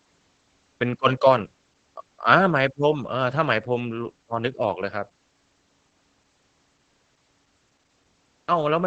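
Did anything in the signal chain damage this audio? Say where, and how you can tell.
Yes, the codec: Opus voice compression throughout, nothing above 8.5 kHz, and the speech sounds muffled and hoarse, which fits SILK wideband coding at around 12 kbps.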